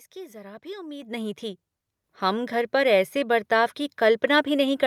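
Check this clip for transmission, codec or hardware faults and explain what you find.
Two abrupt level jumps show the microphone volume stepped up, at 1.02 s after "जरा भी" (about 10 dB) and at 2.04 s after "नहीं थी" (about 6 dB). The call software raised the input volume in single steps, so speech and background noise jump together. That instant, shared step sets it apart from someone simply speaking louder.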